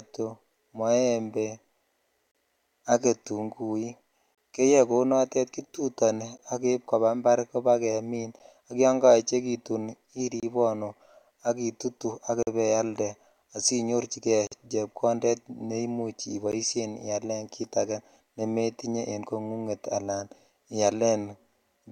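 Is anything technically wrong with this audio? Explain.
Yes. At 2.31, 4.35, 6.38, 8.39, 10.40, 12.43 (between "ak itutu ak" and "ibailde asi nyorchi"), 14.47 and 16.52 s, gaps between stream segments appear every 2 s. Segment timestamps leave holes filled with silence: hard-edged cuts of 11 to 47 ms. Unlike dropouts, the speech resumes exactly where it stopped.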